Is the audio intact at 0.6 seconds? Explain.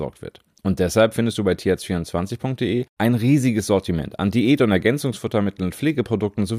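Yes, the speech is intact at 0.6 seconds, with no audible fault at that moment.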